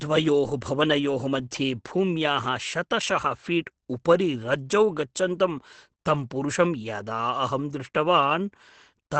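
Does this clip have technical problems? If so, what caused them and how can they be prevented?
Yes. Throughout, the speech sounds muffled and hoarse with nothing above 8.6 kHz, likely Opus compression in its speech mode, at a low bitrate around 12 kbps. Encode at a higher bitrate to prevent it.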